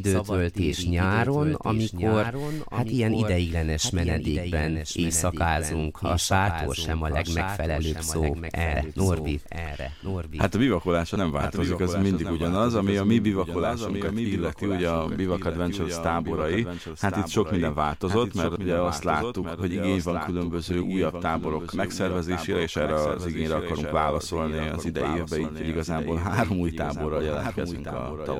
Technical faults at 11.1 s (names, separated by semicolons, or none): doubled audio track; compressed frames skipped